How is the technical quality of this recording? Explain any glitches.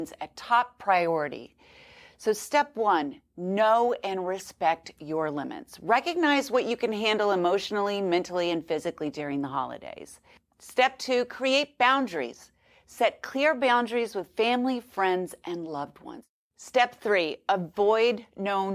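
No technical faults are audible.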